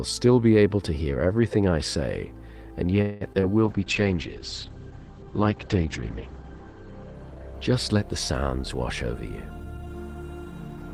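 A call audio freeze comes at 3.01 s and lasts about 0.2 s. The last sound is stretched into a fading buzz or hiss before the audio resumes from where it stopped, so nothing is lost. The cause is likely delayed packets leaving the jitter buffer empty.

Short concealed packet loss follows at 3.33 s and 3.40 s. Each time, about 20 ms of audio missed the decoder and was patched by extending the preceding sound and blending back, heard as a brief smear or wobble.

A call bitrate drop runs from 3.66 s to 8.94 s. The encoder falls from 48 to 9 kbps and narrows the bandwidth from 20 kHz to 8 kHz, so the sound becomes rough, watery and muffled, staying at its worst for nearly 3 s.

A jitter buffer speed-up spans 9.14 s to 10.92 s. An overfull buffer is drained by cutting many short pitch-period slices, about 150 ms in all, so the sound plays roughly 7% faster at unchanged pitch and feels hurried.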